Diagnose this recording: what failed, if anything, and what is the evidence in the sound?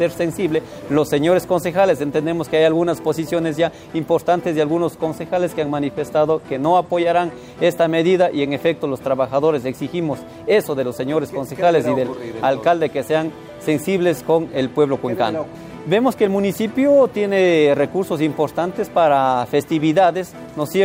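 Nothing failed: no stage from capture through playback leaves any audible evidence of a fault.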